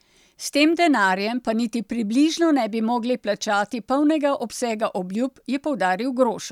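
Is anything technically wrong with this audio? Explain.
No, nothing technically wrong can be heard in this speech recording. There is no point in the clip where a fault shows itself.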